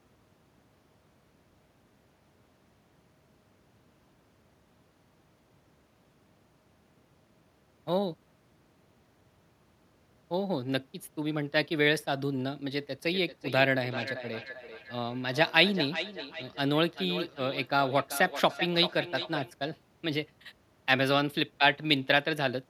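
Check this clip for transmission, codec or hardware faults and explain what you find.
There's one fault here: a feedback echo between two devices, running from about 13.06 s to 19.53 s. Two devices on the same call are sitting close enough that one's speaker feeds the other's microphone. Each echo canceller only removes its own playback, so the leaked sound goes round the loop again. You hear the speech come back about every 400 ms, thinner and ringier, at its loudest about 11 dB below the speech.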